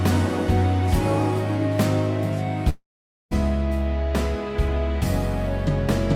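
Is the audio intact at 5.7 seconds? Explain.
Yes, the audio is intact at 5.7 seconds, with no dropout, click, distortion or other fault at that moment.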